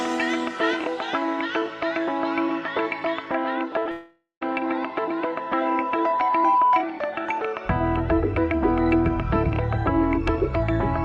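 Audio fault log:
3.79–3.87 s, short concealed packet loss: two back-to-back 20 ms gaps are patched by extending the preceding sound, heard as a brief smear rather than a break.
3.91–4.43 s, long network dropout: the sound continues as a fading buzz or hiss, then about 120 ms of near-silence, likely half a second of lost packets.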